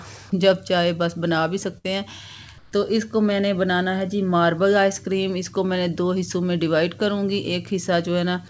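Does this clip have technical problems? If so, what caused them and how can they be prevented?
Yes. A burst of packet loss from 1.78 to 1.86 s meant the receiver had to conceal the gap, stretching and fading the last sound for about 62 ms before resuming roughly 60 ms further on. Prevent this with forward error correction or redundant packets and a slightly deeper jitter buffer.

The sender's discontinuous transmission likely stopped sending audio during a quiet stretch, so from 2.58 to 2.72 s comfort noise replaced the real background for 140 ms as a smoother noise about 6 dB quieter. Prevent this by disabling discontinuous transmission or raising its activity detector's sensitivity.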